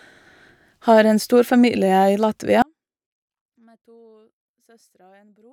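A speech recording in which an audio dropout to a faint residue begins at 2.62 s, right after "en stor familie i", and lasts to the end. The signal vanishes abruptly rather than fading, leaving only a faint sound about 35 dB below its normal level, likely from a lost feed while the path downstream stayed live. On a waveform the envelope collapses to a thin band at that instant; a spectrogram shows the speech energy cut to a dim wash.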